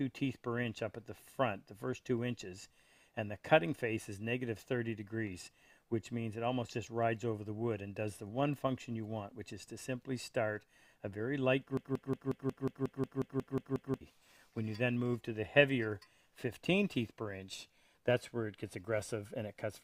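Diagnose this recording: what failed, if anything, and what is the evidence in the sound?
A broken-record loop runs from 11.77 to 14.01 s: a 0.18 s fragment repeats exactly, twelve times back to back. The likely cause is a stalled playback or stream buffer that kept resending its last fragment, so the audio due in that span is lost.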